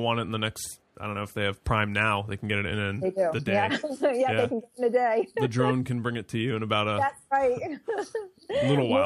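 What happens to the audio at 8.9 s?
Nothing goes wrong at 8.9 s; the audio plays through that moment intact, with no dropout, click or distortion.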